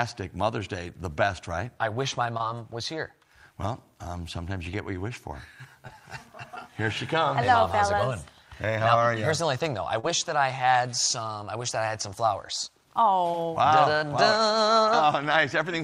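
Three spots show short concealed packet loss, at 2.37 to 2.41 s, 5.87 to 5.91 s and 9.99 to 10.05 s. About 20, 20 and 40 ms of audio arrived too late. The decoder extended the preceding sound to fill each gap, leaving a brief smear or wobble.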